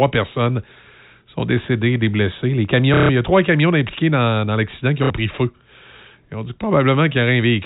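Two brief robotic stutters break up this telephone-band speech, one from 2.94 to 3.09 s and a shorter one from 5.04 to 5.1 s, each with a buzzing texture. Both come from packet loss with the last packet repeated: the receiver replayed its most recent packet to fill a 150 ms gap, which fits five lost 30 ms packets, and then a 60 ms gap, fitting two. Each run buzzes at the packet rate, about 33 Hz. The G.711 coding caps the audio at 4 kHz.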